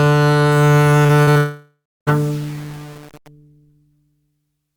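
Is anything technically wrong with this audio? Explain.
Yes, this music clip has three overlapping faults.

From 0.52 to 3.28 s, the music takes on a grainy, gritty distortion that rises and falls with the signal itself, sitting roughly 30 dB below it. Quiet passages and decays sound rough and stepped rather than smooth. This is likely low bit depth without dither: the samples were rounded to very few levels, which fits about 6-bit resolution. With no dither, the rounding error tracks the waveform and is heard as distortion instead of a steady hiss.

Between 1.03 and 1.38 s, the sound turns choppy as short pieces drop out and are patched over. The symptom is repeated packet loss. Audio went missing in several short holes, the longest about 47 ms and roughly 120 ms in total. Each hole was filled by extending the preceding sound, and that concealment covers about 35% of this stretch. Those repeated synthetic patches give the stretch its choppy character.

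From 1.38 to 2.09 s, the music gives way to a fading buzz or hiss, then goes silent for about 0.31 s before resuming at 2.09 s with a jump in continuity. This is likely a long network dropout. About 0.7 s of audio never arrived. The receiver first stretched out the last received sound, which decays into that buzz or hiss, then gave up and left silence. The missing passage is simply gone when playback resumes.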